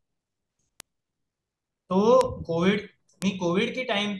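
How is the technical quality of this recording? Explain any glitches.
Three isolated ticks mar this speech recording. A bit error spike occurs at 0.80 s, 2.21 s and 3.22 s: a single flipped bit in memory or on a digital link throws one to three samples off by a power of two, so each is heard as a sharp, broadband click peaking around -8 dBFS, unrelated to the speech.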